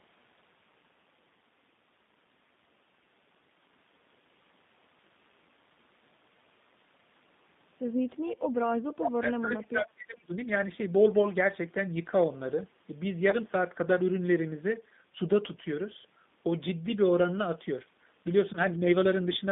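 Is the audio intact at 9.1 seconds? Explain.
No. At 9.1 seconds the speech is sinking under speech suppressed in double talk, which runs from 8.82 to 10.33 s. The voice dips by as much as about 25 dB for roughly a second and a half. The likely cause is an echo canceller that heard both sides talking at once, could not tell this talker from the loudspeaker echo, and turned everything down together.

Inside that stretch, from 9.07 to 9.11 s, a brief echo leak adds a scrap of the voice that arrives 429 ms late and is only a little quieter than the live speech. It sounds like a short, ghostly repeat over the top. This is likely one side's loudspeaker sound reaching its microphone and slipping past its echo canceller, so it is returned down the line.

Underneath both, the G.729 codec is plainly audible here as throughout. The voice is confined to about 150 Hz to 3.7 kHz and has a rough, slightly synthetic grain, which fits an 8 kbit/s codec rebuilding the voice from a vocal tract filter, a pitch predictor and a few pulses per 10 ms frame.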